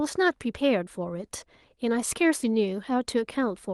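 No technical faults can be heard in the recording. The speech continues without any interruption or disturbance from beginning to end.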